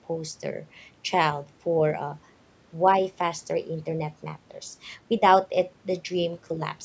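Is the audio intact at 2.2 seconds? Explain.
Yes, the speech at 2.2 seconds is intact, with no dropout, distortion or other fault at that moment, only the ordinary call microphone processing with its usual trimming of the lowest bass.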